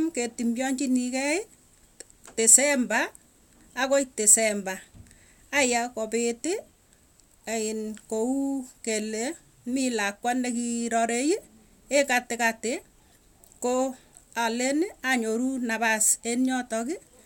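Nothing stood out as a technical fault when listening to this speech recording.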